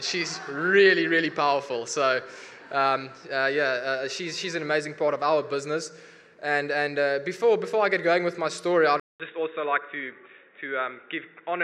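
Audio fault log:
9.00–11.63 s, input switched to a poorer device: the recording likely moved mid-capture to a lesser input, such as another microphone or a headset's call profile, after a gap of 0.2 s with no sound. From that point nothing above 3.8 kHz survives, so the audio turns dull and boxy through to the end. A faint new background noise, sitting far below the signal, comes in with the change. The level stays about the same across the switch.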